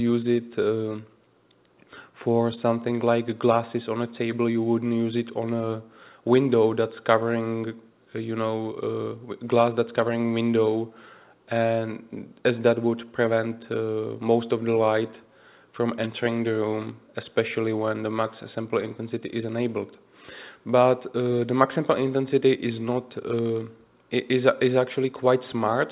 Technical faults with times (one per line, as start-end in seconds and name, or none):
none